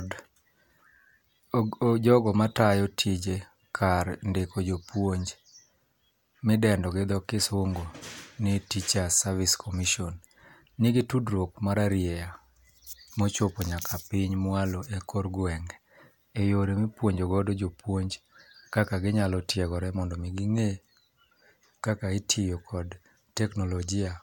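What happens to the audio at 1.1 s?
At 1.1 s the speech plays through cleanly, with no dropout, click, distortion or other break in the signal.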